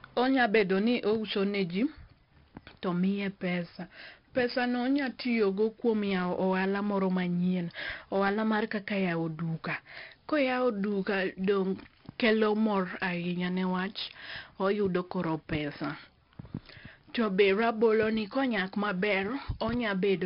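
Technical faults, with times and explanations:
Throughout, 4-bit ADPCM compression: a gritty hiss rides on every loud stretch of speech and rises and falls with its level, with harsh distortion on sharp attacks, and the sound is dull, with nothing above 5.3 kHz. Each sample is coded as a coarse 4-bit step from a prediction, so the error is noise tied to the signal, and the adaptive step lags on sudden onsets. The heavy damage and the dull top fit a bitrate near 44 kbps at a low sample rate.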